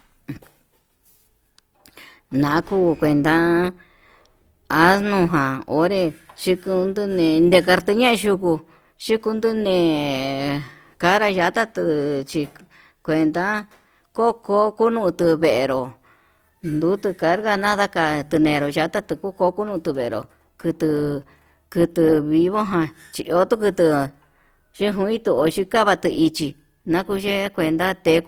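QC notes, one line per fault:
throughout, Opus compression: the encoder was likely starved of bits, and the grain fits Opus in its CELT music mode at a low rate near 24 kbps. With too few bits to code each band in detail, it keeps each band's energy but fills the gaps with folded copies of lower bands or with noise. The speech therefore stays full-bandwidth with few holes and little swirl, but the voice comes out plainly noisy, rough and grainy.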